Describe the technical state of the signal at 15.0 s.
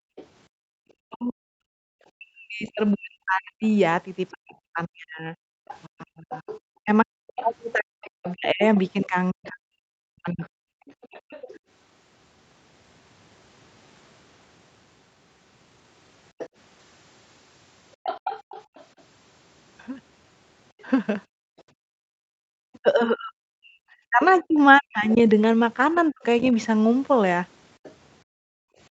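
At 15.0 s the speech signal is intact, with no fault present at that moment.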